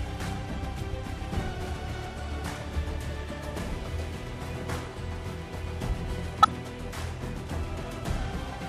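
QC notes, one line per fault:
6.42–6.47 s, corrupt frame decoded: a short burst of misplaced energy lasting about 50 ms, peaking around -10 dBFS. Flipped bits in a few consecutive compressed frames were decoded as though valid, so wrong gains and misread spectral codes produced content at incorrect frequencies.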